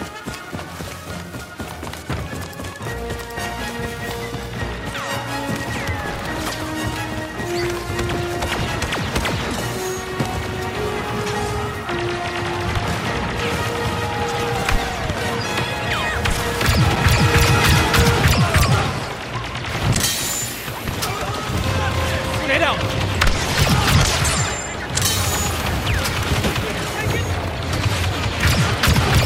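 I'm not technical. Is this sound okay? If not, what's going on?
No. There are two tiny skips, at 4.95 and 14.9 seconds, about ten seconds apart. This is likely audio missing between chunks: a brief moment lost where recording segments join.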